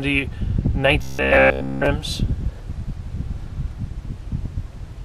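Audio most likely stopped arriving in time between 1.02 and 1.86 s, and the playback filled the gap by looping a buffer of about 15 ms, skipping everything in that stretch. That robotic sound from repeated short buffers imposes a rigid, metallic 66.7 Hz buzz.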